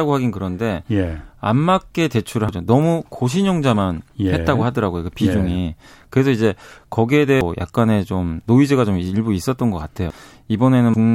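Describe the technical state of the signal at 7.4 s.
At 7.41 s the speech jumps forward. This is a case of compressed frames skipped. A run of coded frames never reaches the output, either missing from the file or rejected by the decoder as damaged. Roughly 0.7 s of audio is lost, across about ten frames of 92.9 ms each. So it is heard as a sudden gap in continuity.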